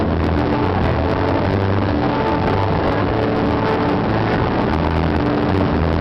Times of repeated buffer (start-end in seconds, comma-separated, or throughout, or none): 1.51-1.54, 2.88-2.90